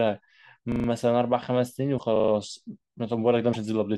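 At 0.72–0.88 s the speech stutters, one 40 ms piece sounding five times in a row with a hard join at each repeat. This is a repeated buffer: fresh audio arrived late, so the device replayed its last buffer four extra times, with essentially nothing skipped. The same 160 ms stutter returns at 2.16–2.32 s.

Between these, at 1.97–2.00 s, and again at 3.53–3.57 s, a brief chirp or noise burst interrupts the speech as the audio jumps ahead. The likely cause is a broken MP3 bit reservoir: after missing frames, roughly 24 ms long, the following frame looked back for borrowed data and decoded bytes belonging to another frame.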